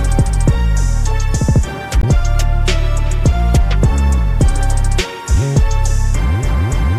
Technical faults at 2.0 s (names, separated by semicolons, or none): damaged data in a compressed stream